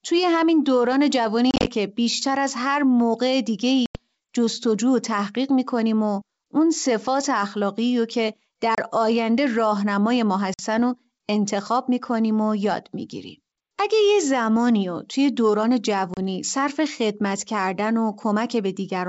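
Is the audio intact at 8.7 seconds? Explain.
No: packet loss on an ADPCM call drops about 30 ms at 8.75–8.79 s, leaving a hard-edged silent hole; the decoder's predictor then mistracks, so speech resumes with brief distortion.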